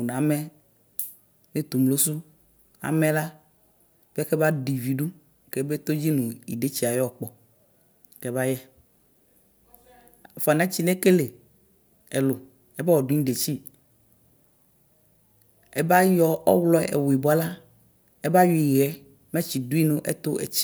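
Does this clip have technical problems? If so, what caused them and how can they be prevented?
No, nothing stood out as a technical problem on listening to this speech clip, so there is no cause to trace or prevention to suggest.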